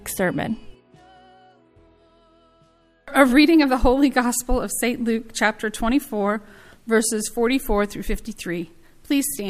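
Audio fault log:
Nothing stood out on listening.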